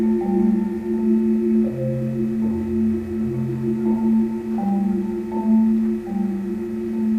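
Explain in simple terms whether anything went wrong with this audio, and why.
Between 3.99 and 4.79 s there is a block size mismatch (truncated). One processing stage passed along longer chunks of audio than the next stage accepted, so the tail of each chunk was cut off. Those repeated cuts produce a steady buzz at 100 Hz.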